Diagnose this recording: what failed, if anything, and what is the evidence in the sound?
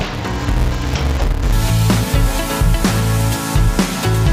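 A sample-format conversion stage read interleaved audio as planar from the start to 1.53 s: within each block, alternating left and right samples were split so the first half fed the left channel and the second half the right. Each half plays at half speed, yet the overall pace holds. The blocks are short, about 5.33 ms, which fits a 256-sample block, so there is no clear octave drop. Instead the sound turns dull and robotic, with a buzz at the 188 Hz block rate.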